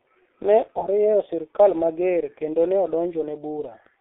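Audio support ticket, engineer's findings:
G.723.1 codec, whole clip: speech muffled and hoarse, consonants smeared. Spectrogram shows a 300 Hz to 3.6 kHz band and a coarse 30 ms frame texture, which fits a roughly 6 kbit/s mode.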